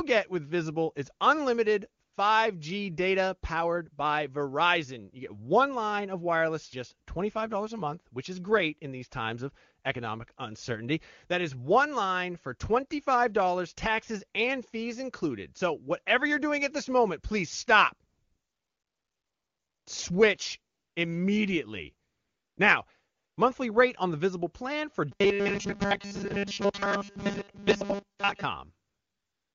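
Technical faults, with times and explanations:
2.03 to 2.13 s, 18.09 to 19.85 s, 20.73 to 20.95 s, 22.07 to 22.57 s, 23.17 to 23.37 s and 28.87 to 29.55 s, AMR comfort noise: in each pause the phone stopped sending speech frames. The receiver filled the gap with synthetic noise built from a coarse level-and-spectrum estimate, so the real room sound switches to a smooth, even hiss. This happens right after "is unlimited" and "this moment please stop", and just before "monthly rate on the". On a spectrogram the gaps show as flat, featureless bands with abrupt edges. The waveform shows a uniform low-level fill.
25.12 to 28.44 s, robotic sound from repeated short buffers: the audio becomes a rigid, metallic buzz at 200 Hz that still roughly tracks the speech. Most of this stretch is repeated material, likely because new audio arrived too seldom and the player looped a 5 ms slice while skipping real audio. 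The spectrogram shows evenly spaced horizontal harmonics at multiples of 200 Hz. The waveform shows a short, identical cycle repeating.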